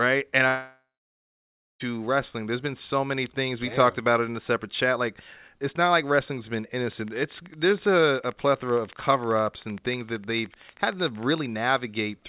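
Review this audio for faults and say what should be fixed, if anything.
From 0.48 to 1.82 s there is a long network dropout: about 1.3 s of speech never arrives. The receiver stretches the last sound into a fading buzz, and for roughly the final second only near-silence remains before speech resumes past the lost section. On a waveform this shows as a decaying tail and then a flat line. On a spectrogram, smeared, fading harmonics give way to an empty band. The likely cause is a stall in packet delivery. Prevent it with a more stable network route and redundancy or forward error correction on the link.

From 6.92 to 11.47 s a train of clicks ticks over the speech and pauses alike, evenly spaced at about 13 per second, some seventy in all, with peaks reaching roughly the level of the speech. On a waveform they appear as identical narrow spikes at regular intervals. On a spectrogram they are thin vertical lines running the full height of the band, which stops at 4 kHz because of the call path, consistent with G.711 mu-law at 64 kbps. 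The likely source is electrical interference from nearby equipment or a faulty connection or power supply. Prevent it by shielding or relocating the offending gear and checking the cabling and power supply.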